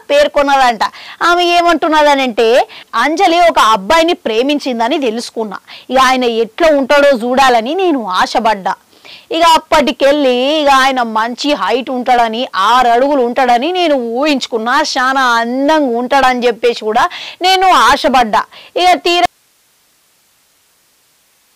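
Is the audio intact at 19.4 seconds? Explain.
No. At 19.4 seconds the sound has already cut out abruptly, at 19.26 s, and from there to the end of the clip only a faint bed of hiss remains, somewhere around 45 dB below the signal's normal level. This is an audio dropout to a faint residue. The wanted signal was likely lost partway along the chain while the downstream path stayed live, leaving its own noise floor audible instead of true silence or a gradual fade.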